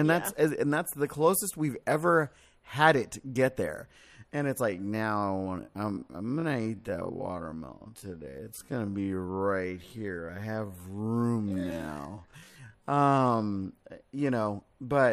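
From 4.66 s to 13.52 s the speech abruptly drops to half its pace while the pitch holds steady, so everything in that stretch sounds drawn out before normal pace returns. This is a time-stretched section, likely produced by software lengthening the audio to fill a set duration: to slow it to 0.5 times speed without lowering the pitch, it repeats short slices of the waveform.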